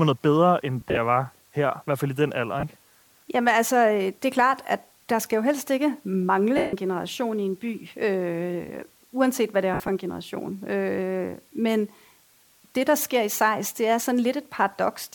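Throughout, an even hiss sits roughly 35 dB below the speech, the sign of low bit depth with dither, consistent with about 9-bit resolution. Dither turns rounding error into steady white noise, so there is no grainy distortion that tracks the signal's level, as undithered truncation would produce. Lost LE Audio frames occur from 0.81 to 0.97 s, where 90 ms of dropouts are scattered with the longest run near 40 ms; at 2.60 to 2.63 s (30 ms); at 6.57 to 6.73 s (160 ms continuous); and at 9.74 to 9.88 s, where 80 ms are lost with a run near 70 ms. The LC3 decoder repeats the last spectrum with random phase, so voiced sound turns into a noisy smear that fades during the longer gaps.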